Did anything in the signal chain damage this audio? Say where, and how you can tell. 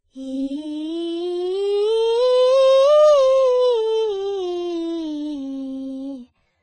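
Yes. The damage sits at the codec stage and runs through the whole music clip: it sounds like AAC compression, likely AAC-LC at a very low rate, which fits around 16 kbps. Nothing survives above 9 kHz, so the top end is dull, and sustained tones warble and fizz because the coder starved the spectrum of bits. On a spectrogram you would see a hard ceiling at 9 kHz with patchy, holed bands beneath it.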